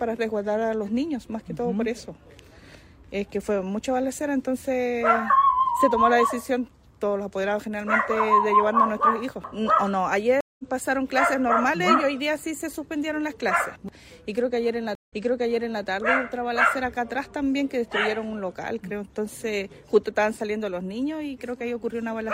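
A stream reconnect happens twice: the connection dropped and the player restarted its decoder mid-stream. At 10.41 s, 180 ms of silence is followed by audio resuming roughly a fifth of a second later. At 14.95 s, 132 ms of silence gives way to audio replayed from 0.74 s earlier.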